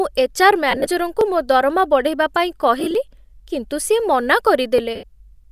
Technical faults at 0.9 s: lost LE Audio frames

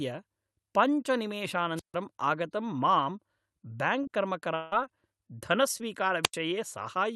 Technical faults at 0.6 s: none

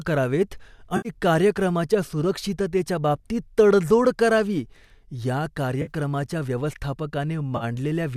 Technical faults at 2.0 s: none

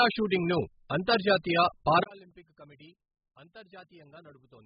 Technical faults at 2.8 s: AAC compression; one channel inverted

